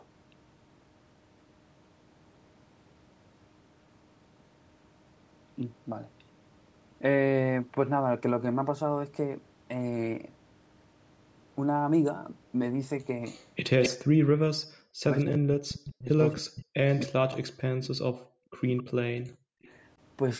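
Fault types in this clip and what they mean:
Echo leak: A delayed copy of the speech returns 263 ms behind the original, most likely because the far end's loudspeaker audio got past its echo canceller and was sent back. It appears at 13.24–13.89 s at about 10 dB below the speech, at 16.09–17.05 s and 18.58–18.83 s at about 20 dB down, and briefly at 19.64–19.70 s at about 35 dB down. It is heard as a trailing duplicate of the talker.
Speech suppressed in double talk: From 13.88 to 19.63 s both sides are talking at once, and the talker's level repeatedly collapses, with the deepest dips around 40 dB. The affected stretches add up to about four seconds in total. The likely cause is an echo canceller that could not tell the near talker from the loudspeaker echo and turned both down.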